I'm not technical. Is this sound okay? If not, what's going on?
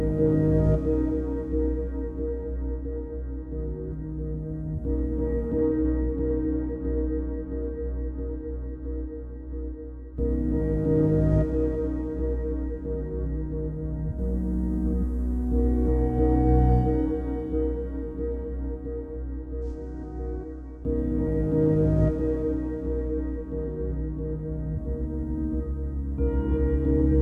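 Yes, nothing in this recording points to a technical problem, so there's nothing here that needs fixing.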